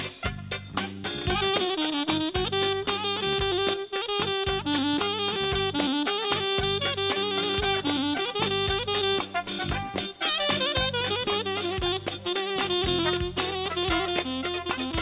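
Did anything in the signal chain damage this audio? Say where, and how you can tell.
No, nothing in the signal chain damaged this audio.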